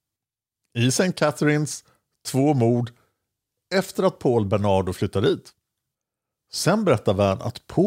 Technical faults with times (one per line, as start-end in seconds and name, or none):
2.32-3.96 drift correction step